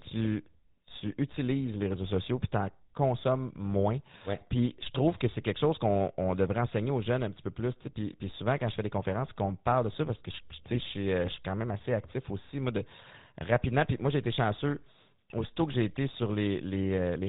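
Throughout, the speech carries the buzzy, gravelly roughness of the GSM full-rate codec, which fits 13 kbps coding: the voice is rebuilt from a vocal-tract filter driven by sparse regular pulses, with nothing above 4 kHz. Unlike transient damage, this coloration never lets up.

GSM bit errors strike at 10.71–10.81 s and again at 13.00–13.06 s, just after "actif aussi moi de". Corrupted filter, pitch or gain values warp the sound into brief squawks and gargles rather than the silent gaps of lost packets.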